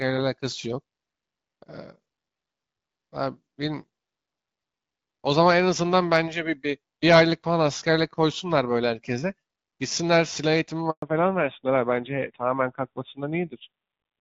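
Up to 10.90 s the speech carries the light, clear sound of HD Voice, consistent with AMR-WB at about 12.65 kbit/s. At 10.90 s there is a handover gap. The call switches networks and no speech frames arrive for 120 ms. The sound fades out within a few tens of milliseconds. It stays silent until 11.02 s. Whatever was said in that window is gone.

From 11.02 s to the end comes a fallback to narrowband. The link has dropped to an older codec, consistent with AMR-NB at about 7.4 kbit/s. Nothing above 4 kHz survives. The speech loses its air and crispness. It sounds duller and boxier. A rougher, coarser texture also creeps in from the lower bitrate. This holds for the rest of the clip.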